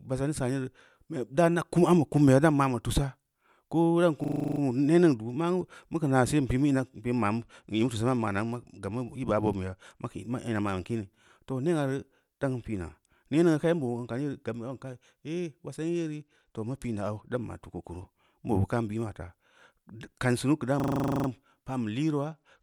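At 4.24 to 4.60 s the speech freezes into a system hang loop. The same 40 ms slice of sound repeats nine times, a machine-gun stutter at 25 Hz, because the driver stalled while the hardware kept replaying its ring buffer. On a waveform, identical 40 ms blocks sit side by side. On a spectrogram they form a comb of vertical stripes.

From 7.42 to 10.10 s a Bluetooth SBC bit pool drop sets in. The treble goes dull and a gritty, grainy noise rides under the speech. The link was congested, so the encoder cut its bit budget, which points to a fall from bit pool 31 to about 15, around 105 kbps. The highest sub-bands are starved and the rest are quantised coarsely. On a spectrogram the top band goes dark or patchy above a flat ceiling, with speckled noise below it. The same drop returns from 15.92 to 17.31 s.

At 20.80 to 21.28 s a second hang loop repeats one 40 ms slice twelve times at 25 Hz, with the same rapid stutter and the same run of identical waveform blocks.

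From 22.28 s to the end of the clip, the bit pool drop comes back and again dulls and roughens the top of the spectrum.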